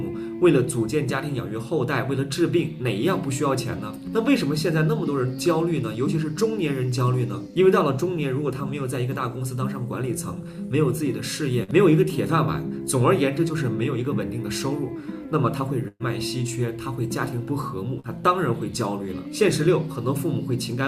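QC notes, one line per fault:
11.63–11.71 s: short concealed packet loss. About 40 ms of audio never arrived in time. The receiver extended the preceding sound for roughly 44 ms, then blended back into the real signal. The patch is heard as a brief smear or wobble, and a short sound can vanish.
15.88–16.03 s: burst of packet loss. About 120 ms of audio went missing in a run. The receiver stretched the last sound for about 119 ms, fading it as the gap lengthened, then dropped to about 30 ms of silence. This leaves a held buzz or fading hiss, and the sound resumes further on with that stretch gone.
18.00–18.07 s: short concealed packet loss. Another 40 ms hole, covered by about 39 ms of extended sound before cross-fading back. It gives a quick wobble or smear, and a brief sound within it may be lost.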